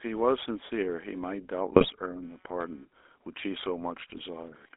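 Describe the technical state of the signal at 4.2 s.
At 4.2 s the speech is at the very end of a burst of GSM bit errors running from 4.0 to 4.21 s. Corrupted filter, pitch and gain values reach the decoder. The sound breaks into squawks, pops and gargling. The span fits about ten 20 ms frames.

The GSM full-rate codec shapes the sound here too. Its excitation is a train of regular pulses feeding a vocal-tract filter. The line passes only 300 Hz to 3.6 kHz. The result is a plainly buzzy, gravelly roughness, which fits 13 kbps full-rate coding.

Computer activity noise also sits underneath. Processor and peripheral load changes disturb the shared audio ground. This produces a faint buzz pulsing at around 200 Hz, roughly 40 dB below the signal. It follows the machine's activity, not the sound.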